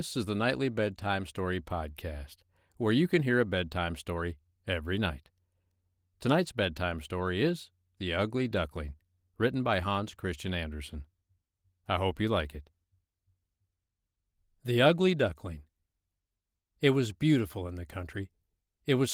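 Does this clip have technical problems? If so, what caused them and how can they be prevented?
No, nothing stood out as a technical problem on listening to this speech clip.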